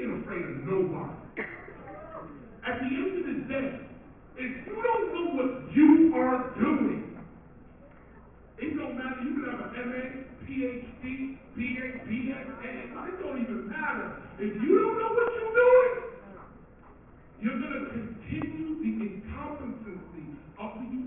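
No technical faults are audible anywhere in the clip.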